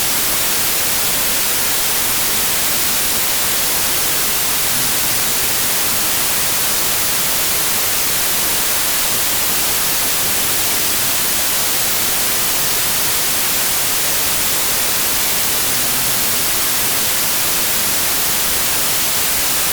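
From start to finish the audio suffers a wrong sample width: data written as 32-bit integers are read as packed 24-bit samples, so most values straddle mismatched bytes. The result is loud hiss with the original buried beneath it, running at 0.75 speed and correspondingly lower pitch.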